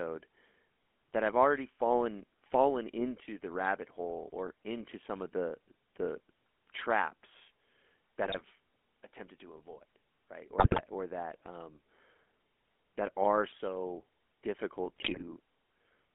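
GSM full-rate codec coloration runs through the whole speech clip: the voice is squeezed into a 250 Hz to 3.4 kHz phone band and has a plainly audible buzzy, gravelly roughness. This comes from modelling the vocal tract and rebuilding the excitation from sparse, regularly spaced pulses, consistent with a 13 kbps GSM stream. GSM bit errors break in at 8.24 to 8.41 s, 10.58 to 10.81 s and 14.96 to 15.23 s, where the voice turns to squawks, pops and gargling. Corrupted filter, pitch or gain values reaching the decoder distort the spectrum or spike the level. The second burst has the densest error rate on the link, about 5.3%.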